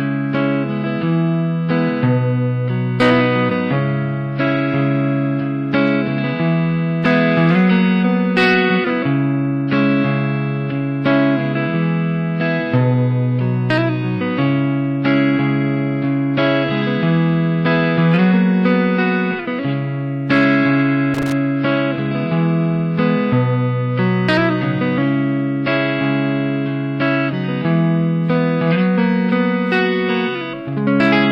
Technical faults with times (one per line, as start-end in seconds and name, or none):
21.14-21.32 loose connector crackle